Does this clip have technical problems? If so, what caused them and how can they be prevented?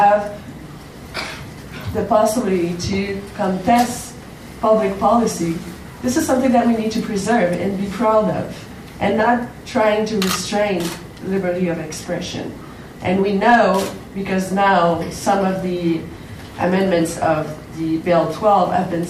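Yes. A brief harsh crackle from 13.47 to 13.60 s is hard clipping: peaks about 4 dB over the limit were cut flat. Leaving more headroom before conversion prevents it.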